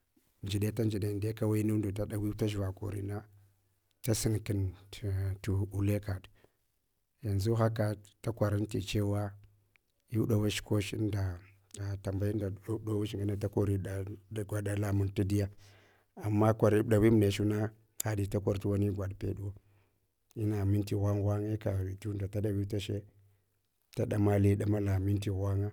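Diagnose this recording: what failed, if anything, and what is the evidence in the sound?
Nothing failed anywhere along the chain that I can hear; the speech runs steady and unbroken the whole way, with no sign in the sound of any stage misbehaving.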